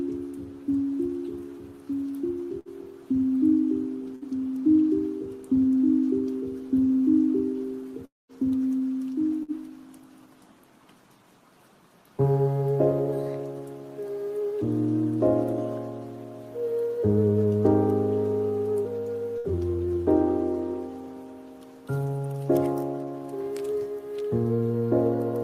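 Bursts of packet loss occur at 2.59 s and 4.15 s. About 60 ms of audio never arrived, so the receiver stretched the preceding sound for roughly 60 ms while fading it. This gives a brief held buzz or hiss before playback resumes past the missing section.

From 8.05 to 8.32 s the sound becomes a fading continuation that gives way to about 190 ms of silence, then returns with roughly 240 ms absent, most likely a long network dropout. Further bursts of packet loss follow at 9.43 s and 19.38 s, each the same short concealed gap.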